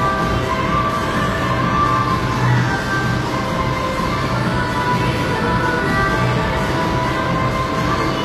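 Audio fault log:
Throughout: likely HE-AAC compression. Treble sounds gritty and metallic, rebuilt from copied lower bands. Nothing above 14.9 kHz. Fits a bitrate near 24 kbps.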